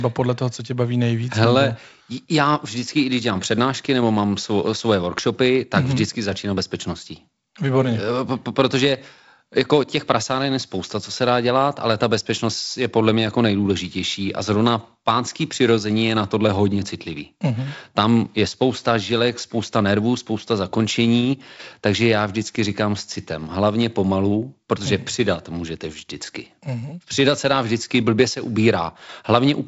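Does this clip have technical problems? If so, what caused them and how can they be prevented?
No, there are no technical problems to report here.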